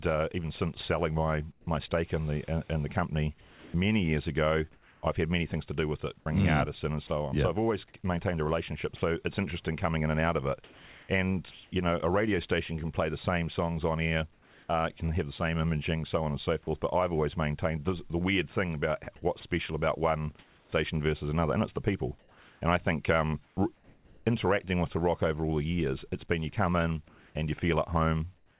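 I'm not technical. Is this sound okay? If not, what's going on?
No, it has a couple of problems. The first is sound chopped by the voice detector, in three stretches: from 1.52 to 11.72 s (starting after "even since selling my" and running up to "know a radio station"), from 14.33 to 16.67 s (right after "same songs on air"), and from 19.04 to 24.26 s. In each, bits of the talking drop out and get replaced by a bland hiss, about one and a half seconds' worth in the first and third stretches and under half a second in the second. So it sounds choppy. This is likely the caller's phone system deciding, wrongly, that nobody was talking and briefly going silent.

The second is comfort noise in place of the background, from 27.08 s to the end, after "been you come in". For about half a second the real background sound is swapped for a smooth, featureless hiss. That's likely the system filling a pause with made-up noise once it stopped sending audio. 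The whole clip is also a bit muffled, because this kind of call line carries nothing above about 4 kHz.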